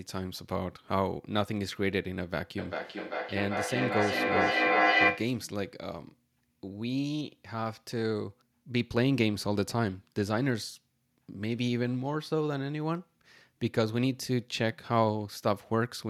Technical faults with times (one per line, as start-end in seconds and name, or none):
2.58-5.45 feedback echo between two devices